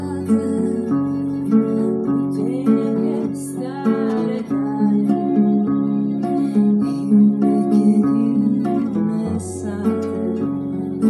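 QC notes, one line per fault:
No faults to note.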